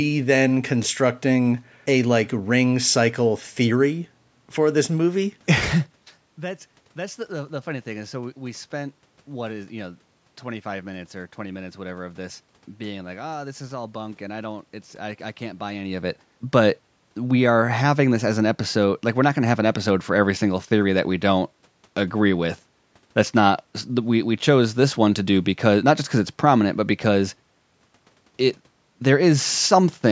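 The speech signal has no technical fault: it carries the usual call microphone processing with the lowest bass trimmed and nothing above 8 kHz, a bed of room noise, and two level shifts, once early on and again about halfway through, that come from the talker moving relative to the microphone rather than from the system.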